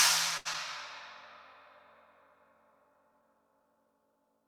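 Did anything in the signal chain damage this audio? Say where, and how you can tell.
Yes. A short stall from a late packet at 0.37 to 0.47 s points to the network and jitter buffer: a packet arrived late, the buffer ran dry, and the receiver held the last sound for about 78 ms before resuming where it stopped, adding that much delay.

Short concealed packet loss follows at 0.53 to 0.56 s, also a network fault: about 20 ms of audio never reached the decoder. The receiver covered the gap by extending the preceding sound and blending back, leaving a brief smear or wobble rather than a silent hole.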